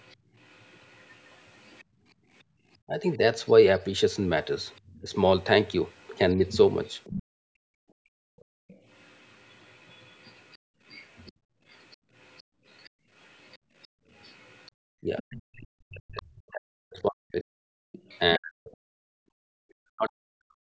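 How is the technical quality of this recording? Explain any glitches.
The recording has clear echo-canceller trouble: a faint second voice, repeated dips in the room sound, and parts of the speech itself pushed down.

Other side's voice leaking through, 0.0 to 18.19 s: a quiet second voice sits under the talker, about 35 dB below the speech. The likely cause is the far end playing on a loudspeaker and the echo canceller leaving a residue in the microphone. On a spectrogram it shows as faint, separate harmonic traces under the main speech. The waveform barely changes.

Background gated by the echo canceller, at 1.84 to 2.59 s, 7.23 to 14.74 s and 17.88 to 19.43 s: the canceller turned the microphone down while the loudspeaker played, so the room tone drops and returns. The first dip is about 20 dB deep and lasts roughly half a second. The later ones reach about 33 dB, totalling around three seconds in the middle span and only a brief moment near the end. 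The spectrogram shows sudden dark gaps in the noise floor, and the waveform's low-level hiss flattens there.

Speech suppressed in double talk, 2.87 to 6.4 s and 15.02 to 20.64 s: when both sides overlapped, the canceller couldn't tell the talker from the echo and attenuated everything, likely for that reason. The talker's voice dips or breaks up. The dips are brief and about 15 dB deep in the first span. In the second span they reach about 40 dB and cover roughly four seconds. The waveform shows chopped, shrunken speech envelopes. The spectrogram shows harmonics fading or vanishing mid-word, against a band that ends at 8 kHz from the call's microphone processing.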